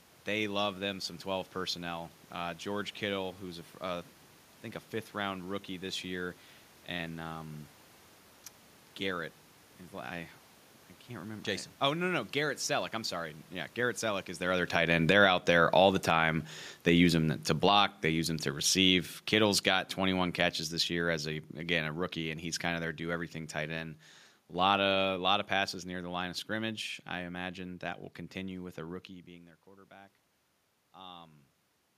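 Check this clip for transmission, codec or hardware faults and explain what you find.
The clip has automatic gain control faults, both falling and rising gain.

Automatic gain falling runs from 14.61 to 23.31 s. Just before it, near 14.5 s, the talker moves. The gain control judges the input too loud and lowers its gain by about 14 dB over several seconds. Voice and room noise sink together.

Automatic gain rising happens three times: 15.22 to 16.53 s, about 6 dB; 17.74 to 18.17 s, about 7 dB; and 28.86 to 31.44 s, about 3 dB. In each, the gain control judges the input too quiet and lifts its gain. The last rise follows an input drop of about 20 dB as the talker moves away around 29 s. Voice and background swell together.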